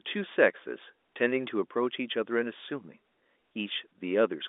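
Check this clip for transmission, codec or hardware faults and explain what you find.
Nothing faulty can be heard in this speech.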